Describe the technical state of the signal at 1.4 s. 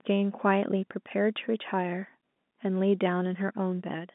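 At 1.4 s the audio is intact, with the speech carried through the G.711 telephone coding as a narrow line band that has nothing above about 3.8 kHz.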